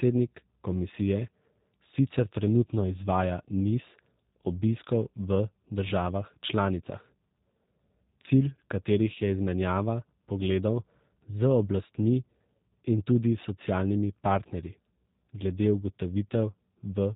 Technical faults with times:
0.00-17.16 G.729 codec

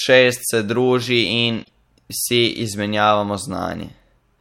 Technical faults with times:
1.61-1.70 damaged data in a compressed stream

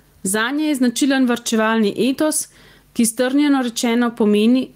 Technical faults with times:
0.00-4.76 gain pumping

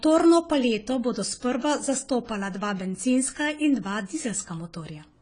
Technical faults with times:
0.00-5.21 AAC compression

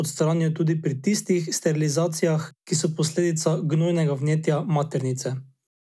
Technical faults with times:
none

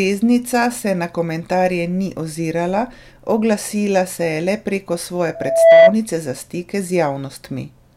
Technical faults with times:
5.35-5.94 loudspeaker feedback squeal

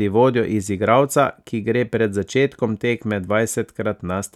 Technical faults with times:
none

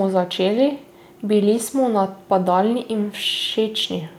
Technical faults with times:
none

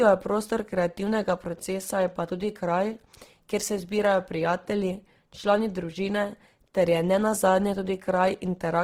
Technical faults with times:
0.00-8.84 Opus compression

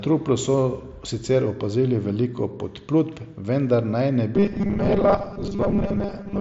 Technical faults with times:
4.35-6.41 robotic sound from repeated short buffers

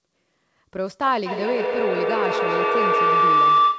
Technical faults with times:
1.26-3.78 feedback howl

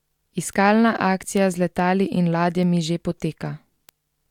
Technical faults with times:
0.11-3.89 word clock ticks

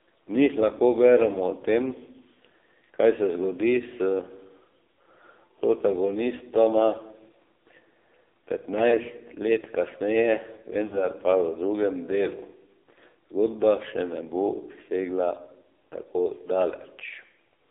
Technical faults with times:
0.00-17.70 AMR narrowband mobile codec
8.90-8.99 lost AMR speech frames
10.86-11.06 lost AMR speech frames

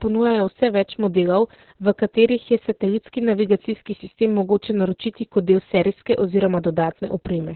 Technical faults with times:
0.00-7.55 Opus voice compression

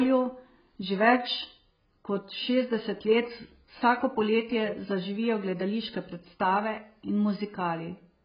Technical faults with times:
0.00-8.24 AAC compression

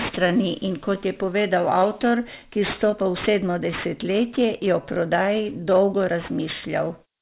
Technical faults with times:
0.00-7.22 aliasing

